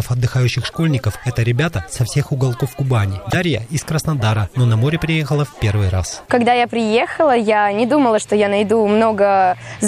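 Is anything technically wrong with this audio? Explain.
Yes. From 3.30 to 3.34 s there is a corrupt frame decoded: flipped bits in a couple of compressed frames were played anyway, so misread gains and codes put energy at the wrong frequencies. The result is a brief, chirpy noise burst over the audio.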